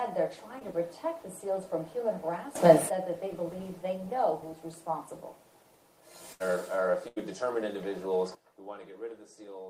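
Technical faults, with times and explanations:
0.59–0.63 s, short concealed packet loss: roughly 20 ms of audio never arrived, and the receiver bridged about 13 ms of it by extending the preceding sound before blending back in. You hear a tiny smear or wobble.
2.55–2.89 s, sudden gain jump: sound and background noise leap up together by about 16 dB with no ramp, then drop back. It's likely a digital gain change applied in a single step.
6.33–6.42 s and 7.08–7.18 s, burst of packet loss: each time about 80 ms goes missing. The decoder keeps extending and fading the last sound for roughly 70–80 ms, giving a held buzz or fading hiss, then jumps ahead with that stretch gone.
8.35 s to the end, sudden gain jump: everything, noise floor included, abruptly falls by about 14 dB and stays down. It's likely a step change in digital gain again, with no fade.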